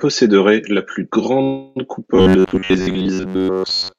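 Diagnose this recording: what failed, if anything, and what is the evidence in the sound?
Network and jitter buffer stage: right after "la plus", from 1.43 to 1.78 s, there's a call audio freeze. The last sound stretches into a fading buzz, then speech resumes intact, likely from delayed packets.

Same stage, from 2.16 s to the end: robotic sound from repeated short buffers. A rigid 94 Hz buzz rides the speech, most likely short chunks of about 10.7 ms replayed over most of that stretch.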